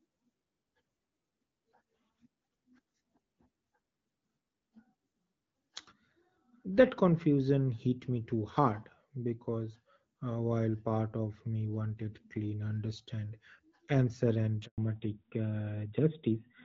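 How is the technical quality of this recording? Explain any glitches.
The recording is speech carried over a wideband call whose codec damage is light and consistent with AMR-WB at around 12.65 kbit/s, and two connected glitches occur near the end.

Handover gap, 14.66 to 14.78 s, right after "clean understand answer and". The call was passed from one network link to another, and no speech frames got through during the switch. The sound cuts out for about 120 ms and then resumes on the new link. Whatever was said in that window is simply gone.

Fallback to narrowband, from 14.78 s to the end. Once the call resumed after the handover, it was no longer in HD Voice but on an older narrowband codec, which fits AMR-NB at about 12.2 kbit/s. Nothing above 4 kHz survives from this point, so brightness is lost, and the speech sounds duller and rougher than before the gap.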